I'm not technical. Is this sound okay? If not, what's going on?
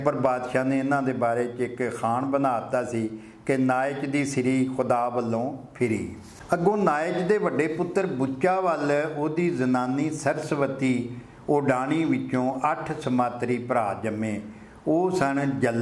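Yes, it sounds fine.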